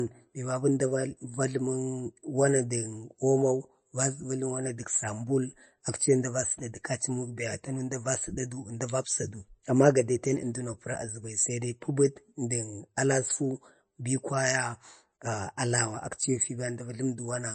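From start to finish the speech has a watery, swirly edge and nothing above 8.3 kHz, so it's likely MP3 compression, and a starved one. That hard treble cut and flickering detail point to a low bitrate, somewhere near 34 kbps.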